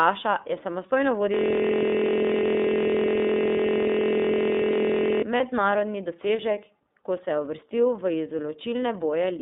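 Speech, carried through the iLBC codec for the whole clip. The band is cut to roughly 200 Hz to 3.7 kHz, so nothing above the telephone range survives. The codec damage is plainly audible. The voice sounds rough and slightly synthetic, because each frame's excitation is coded on its own at a low rate. The sound fits the 13.33 kbps mode with 30 ms frames. Between 5.37 and 5.41 s there are lost iLBC frames. The gap is about 30 ms long, which fits a single dropped frame. The decoder fills it by repeating the last pitch cycle mixed with noise. You hear a brief held, slightly buzzy vowel instead of fresh sound. iLBC frames do not depend on earlier ones, so the voice comes back cleanly right after the gap.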